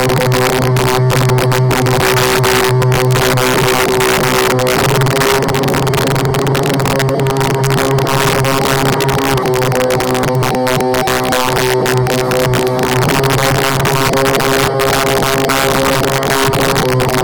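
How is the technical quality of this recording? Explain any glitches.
Quality is poor because of one fault throughout. Harsh, violent cracks hit the loudest moments: integer overflow, where peaks driven about 3 dB too hot wrap to the opposite sign instead of limiting, affecting a small fraction of samples.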